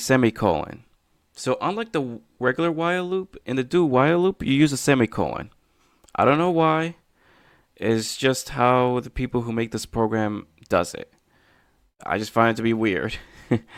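Nothing goes wrong anywhere in this speech recording; there's no technical fault to point to at any moment.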